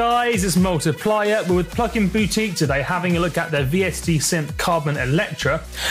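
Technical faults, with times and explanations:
No technical faults can be heard in this recording.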